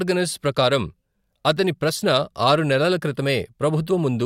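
No technical faults can be heard anywhere in this recording.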